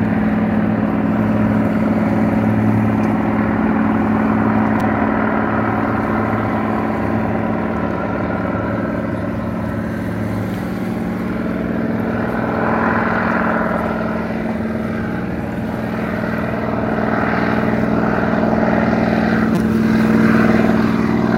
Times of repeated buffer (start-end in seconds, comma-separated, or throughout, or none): 4.80, 19.55-19.57